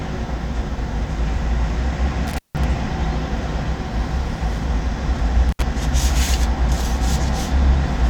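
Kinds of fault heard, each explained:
Intermittent contact: a loose connection briefly opens, cutting the sound for about 160 ms near 2.3 s and 70 ms near 5.5 s, with crackle at the edges rather than clean digital gaps.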